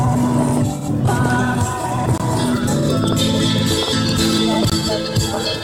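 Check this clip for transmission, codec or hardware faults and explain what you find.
The music has two gaps between chunks, at 2.18 to 2.20 s and again at 4.70 to 4.72 s. The audio was carried in blocks of about 2.5 s, and at each join 20 ms of silence sits between one block ending and the next beginning. Nothing is missing, but the music stops abruptly and resumes. On a waveform each gap is a flat line with sheer edges, and on a spectrogram it is a thin vertical blank band across all frequencies.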